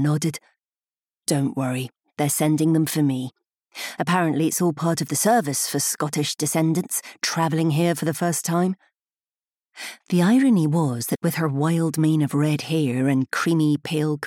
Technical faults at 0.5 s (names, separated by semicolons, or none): none